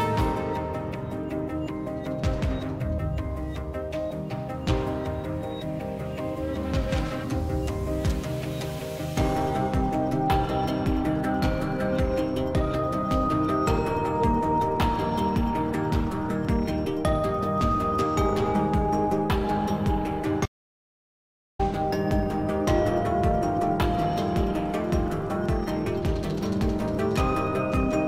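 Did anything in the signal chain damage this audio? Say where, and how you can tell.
Yes: the input likely dropped out upstream while recording continued, producing an audio dropout to silence from 20.46 to 21.59 s, 1.13 s of silence with no room tone.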